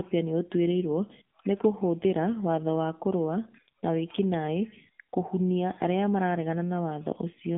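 From start to finish, the speech carries the sound of an AMR narrowband mobile codec. The band is squeezed to roughly 150 Hz to 3.5 kHz, and nothing reaches above 3.6 kHz. The codec rebuilds the voice from a vocal-tract model fed by sparse pulses, so the damage is plainly audible. Consonants lose their edge. The tone turns buzzy and synthetic, which fits a low mode of about 7.4 kbps.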